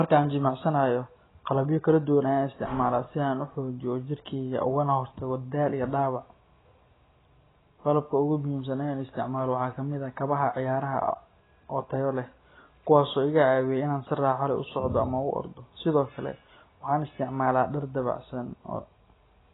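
Speech with AAC compression throughout, likely from a very low bitrate near 16 kbps: heavy codec damage, nothing above 3.9 kHz, and a smeared, warbling texture that a plain low-pass filter wouldn't cause.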